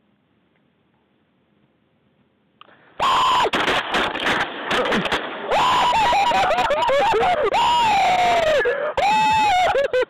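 Weak reception lets bit errors slip past the DAB error correction into the MP2 data, corrupting samples into short noise blips in single sub-bands and scale factors so that individual sub-bands leap in level for up to a frame. That is DAB burbling, heard from 4.04 to 4.53 s and again from 7.27 to 7.54 s as short blips of noise over the sound. The first burst is slightly denser, pointing to an error rate of a few tenths of a percent.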